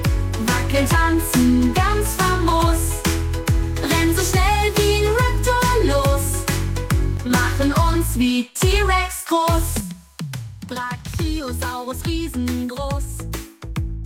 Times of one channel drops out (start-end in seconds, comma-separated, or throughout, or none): 7.17-7.30, 9.80-14.06